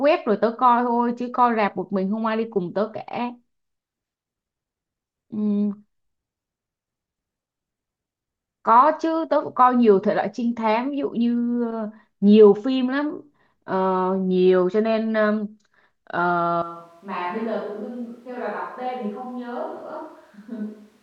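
A speech recording that likely switches to a distant microphone at 16.62 s, leaving the voice suddenly roomy and thin, roughly 10 dB quieter, with more background noise through to the end.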